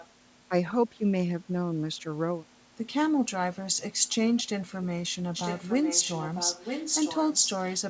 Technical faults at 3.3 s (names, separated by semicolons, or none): none